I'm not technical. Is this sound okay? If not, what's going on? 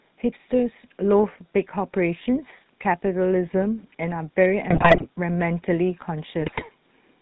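No. The whole recording has passed through the GSM full-rate codec, the original digital mobile phone speech coder. It rebuilds the voice from a rough model of the throat and mouth, driven by a simplified pulse pattern, and discards everything above 4 kHz. That explains the muffled top end and the buzzy, gravelly roughness, damage that is plainly audible throughout rather than subtle.

On top of that there are two bursts of GSM bit errors, from 4.70 to 5.06 seconds and from 6.40 to 6.65 seconds. Here the data carrying the speech was corrupted, as happens on a weak phone signal, so the decoder worked from wrong values for tone, pitch and loudness. For those moments the voice breaks up into squawks, pops and gargling instead of clean speech.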